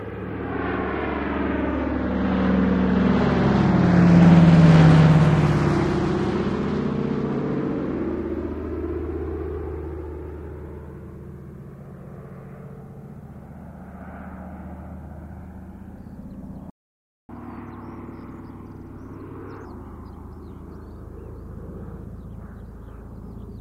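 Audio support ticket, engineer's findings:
Playback stall, 16.70–17.29 s: sound cuts out for about 0.59 s mid-flow; likely the player's buffer ran dry or its thread was blocked.

Catch-up at higher speed, 17.29–19.65 s: player resamples the backlog at 1.25x, pitch raised about four semitones, recovering lost time.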